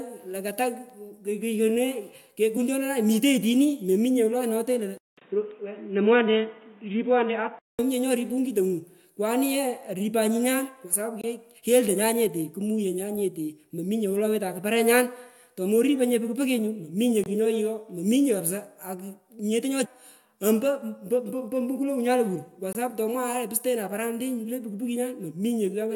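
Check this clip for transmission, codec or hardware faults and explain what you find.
Three kinds of fault turn up here: damaged compressed data, a switch to a poorer input, and regular gaps between chunks.

Damaged data in the compressed stream shows up at 2.56 s and again from 19.84 to 19.86 s. Bad bytes make the decoder misread frames, lose sync and hunt for the next header, so each spot comes out as a brief glitch.

From 4.98 to 7.79 s the input likely switched to a poorer device. There's a 200 ms silence at the change, then nothing above 3.8 kHz, so the sound turns dull and boxy. The new hiss sits well below the signal, and loudness stays about the same.

There's a gap between chunks at 5.19, 11.21, 17.24 and 22.73 s, the last one right before "sapu tomwaye lo". Each is a 23 ms hole. That fits audio stored in 6-second pieces with padding or a late start at each join.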